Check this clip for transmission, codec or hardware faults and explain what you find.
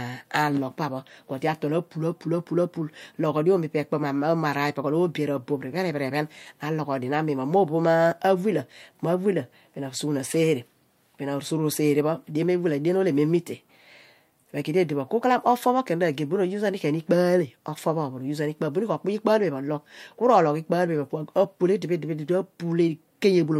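Nothing wrong can be heard in this speech recording.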